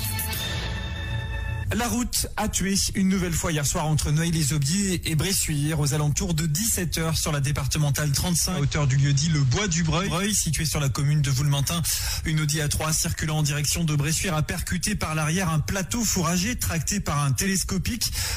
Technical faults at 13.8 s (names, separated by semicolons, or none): none